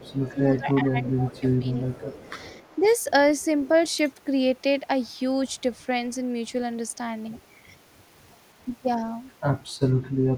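From 0.0 to 2.16 s the speech is suppressed in double talk: the talker's level dips by up to about 15 dB for roughly one and a half seconds in total, likely because an echo canceller turned down both sides while they overlapped. Unlike a plain dropout, the voice thins and sags in pieces rather than vanishing cleanly.

Echo leak appears at 0.06 to 0.36 s, 1.07 to 1.11 s, 1.36 to 1.41 s, 1.88 to 2.89 s and 5.49 s. It is a faint copy of the speech trailing by 382 ms, about 20 to 25 dB down, and nearer 40 dB down at 5.49 s. Its likely cause is residual loudspeaker pickup that the far end's canceller left in. A delayed duplicate like this sets it apart from room reverberation.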